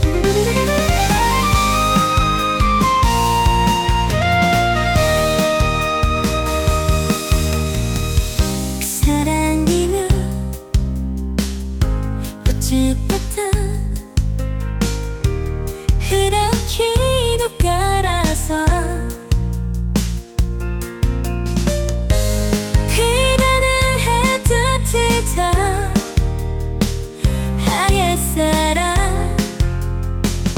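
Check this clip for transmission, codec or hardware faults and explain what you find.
No transmission, codec or hardware faults can be heard in the clip; the signal stays continuous and steady throughout.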